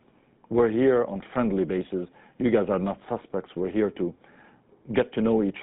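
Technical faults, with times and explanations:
Throughout, GSM full-rate codec: the speech has been carried through the original GSM coder, which models the vocal tract and excites it with a sparse, regularly spaced pulse train rather than the true residual. That coarse excitation leaves a plainly audible buzzy, gravelly roughness on the voice, consistent with a 13 kbps full-rate stream. The telephone channel confines the audio to roughly 150 Hz to 3.7 kHz, with nothing present above 3.8 kHz, so the speech sounds narrow and dull.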